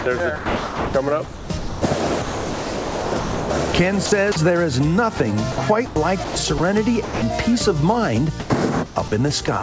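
From 0.00 to 4.36 s, 5.18 to 7.22 s and 8.40 to 9.48 s the sound cuts in and out, with roughly 2.5 s, 0.5 s and 0.26 s swapped for synthetic comfort noise. This is likely sound chopped by the voice detector, which gated transmission and filled the gaps with comfort noise. Nothing is present above 8 kHz, which fits a 64 kbps G.722 call path.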